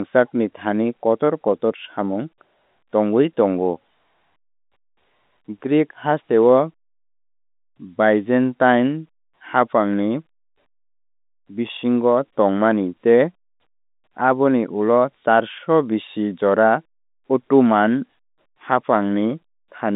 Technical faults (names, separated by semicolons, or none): none